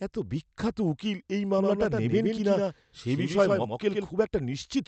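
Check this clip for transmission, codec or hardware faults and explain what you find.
One fault stands out, a doubled audio track. From 1.58 to 4.08 s, just after "এত বিখ্যাত উকিল এই", a second copy of the speech was likely mixed in by a slower capture path. It trails about a tenth of a second behind, a few dB quieter, giving a hard, roomless echo that starts and stops abruptly. The call codec's narrowed bandwidth is also audible throughout.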